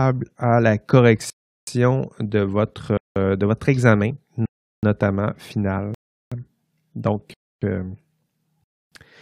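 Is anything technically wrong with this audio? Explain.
Yes. The speech is interrupted six times by blocks of digital silence. They fall at 1.30 to 1.67 s, 2.97 to 3.16 s, 4.46 to 4.83 s, 5.94 to 6.32 s, 7.34 to 7.62 s, and 8.64 to 8.92 s. The gaps last about 0.37, 0.19 or 0.28 s. Those lengths fit whole multiples of a 4096-sample buffer at 44.1 kHz. The output buffer was likely not filled in time, so zeros went out instead. Each gap is an abrupt hole.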